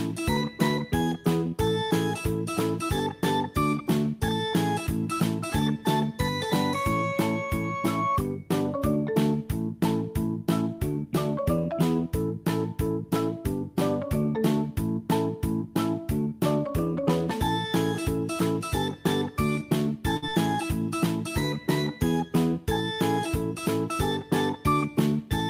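At 20.17 s there is a burst of packet loss lasting until 20.25 s. Several packets in a row arrived too late or not at all. The receiver filled about 54 ms by stretching the last sound it had and fading it down. That fill comes across as a brief held tone or hiss that dies away. The audio then picks up again further along. About 60 ms of the original is simply gone, so the flow jumps.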